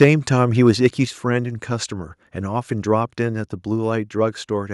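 From 0.01 to 0.09 s the speech has a harsh, crackling edge. This is microphone overload. The input was likely set too hot, driving the peaks about 7 dB past the converter's limit. Their tops are sheared flat, and a noticeable share of the waveform is cut off. At 0.04 s, inside that burst, the level drops suddenly by 2 dB. This is a microphone volume step-down, likely the call software cutting the device's input gain in one move after the peaks. Voice and background fall together.

From 0.67 to 0.86 s the crackle returns, but milder. This is microphone overload again, with peaks about 3 dB over the limit and only a small fraction of the waveform clipped. At 1.05 s a second microphone volume step-down follows. It is deeper, a 5 dB drop. The whole signal becomes audibly quieter at once, a little after the distorted stretch.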